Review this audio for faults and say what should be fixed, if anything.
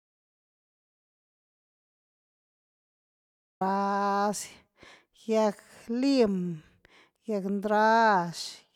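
The speech opens in an audio dropout to silence. From the very start to 3.61 s there is nothing at all: no room tone, no noise floor, just silence. The dropout is already under way when the clip begins, and the speech comes in abruptly at 3.61 s. The likely cause is a lost input, such as a disconnected device, failed link or accidental mute, while recording carried on writing silence. Whatever was said in that stretch is gone. To prevent it, monitor input levels and connection status live and re-record the opening.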